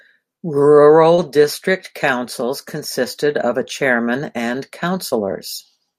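Speech recording with short concealed packet loss twice: about 20 ms of the stream arrived too late at 1.15–1.19 s, just before "district councils consisted of", and at 5.09–5.14 s, right after "of a chairman and". The decoder bridged each gap by extending the preceding sound, leaving a brief smear or wobble.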